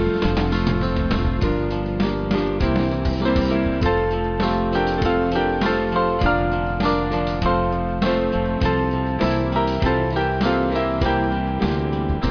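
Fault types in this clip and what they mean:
No technical faults can be heard anywhere in the signal.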